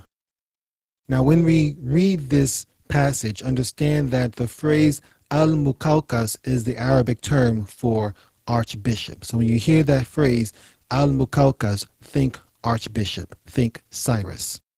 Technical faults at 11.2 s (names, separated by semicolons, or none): overlap-add ripple; Opus voice compression